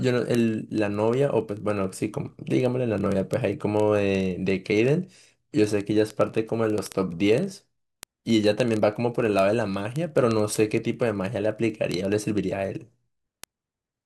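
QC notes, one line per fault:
0.10 s to end, word clock ticks: a steady train of sharp ticks of uneven strength, about every 30 ms, several hundred in all, running under the speech. The receiving device is not locked to the sender's clock on the digital link, with a clock error of roughly 700 ppm. Each time the two clocks slip past each other, a few samples are misread and a single sample is dropped or repeated, and each slip is heard as one tick.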